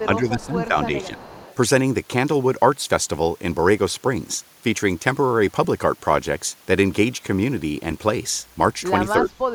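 An echo canceller on a loudspeaker end likely let part of its microphone pickup through, producing an echo leak: a faint copy of the speech trailing by 321 ms, roughly 20 to 25 dB down, at 0.0 to 0.06 s, 0.40 to 0.46 s and 0.97 to 1.55 s.

In the same stretch, speech suppressed in double talk appears, where the canceller, likely unable to separate the near talker from the returning echo, turned everything down. The speech dips by up to about 20 dB from 0.06 to 0.76 s and by around 10 dB from 0.99 to 1.24 s.

At 5.64 s and again at 7.91 s, lost LE Audio frames leave a 7.5 ms gap each, which fits a single LC3 frame. The decoder fills each gap by reusing the previous spectrum with scrambled phase, so a brief noisy smear replaces the tonal detail.

From 9.22 s to the end, the double-talk suppression returns, pulling the speech down by up to about 20 dB.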